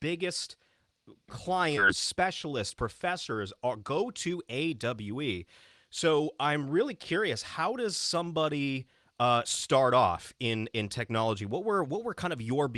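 Speech carried over a call link whose spectrum stops near 12 kHz, consistent with Opus at around 32 kbps. At 1.77 s a skip ahead drops roughly a second of speech, with playback jumping straight to later audio. The waveform shows an abrupt splice with no silent gap, and the spectrogram shows formant tracks breaking discontinuously. From 1.91 to 3.98 s a jitter buffer speed-up plays the speech at 105% speed without changing pitch. The receiver repeatedly cut out tiny pitch-period slices, totalling about a tenth of a second, to shed excess buffered delay. The speech sounds slightly hurried, and the waveform shows periodic cycles quietly missing while harmonic spacing stays unchanged.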